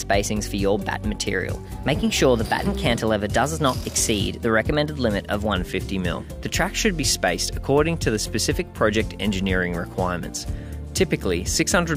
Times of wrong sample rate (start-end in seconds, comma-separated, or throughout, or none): 0.00-5.54